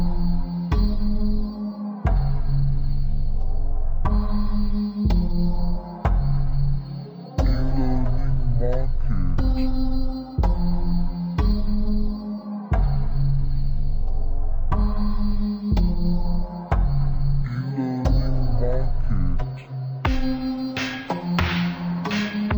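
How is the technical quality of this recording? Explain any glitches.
Poor, because one fault runs throughout. Stereo read as mono: interleaved left and right samples play as one channel. Everything sounds half speed, an octave low, with a faint mirrored image up high.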